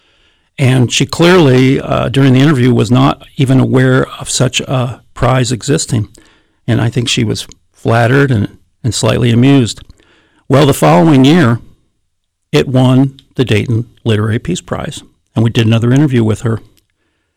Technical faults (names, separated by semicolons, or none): hard clipping